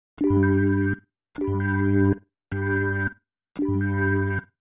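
No technical faults are audible.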